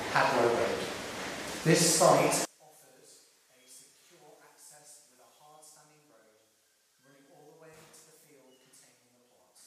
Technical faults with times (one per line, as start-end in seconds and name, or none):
2.45-9.66 one channel inverted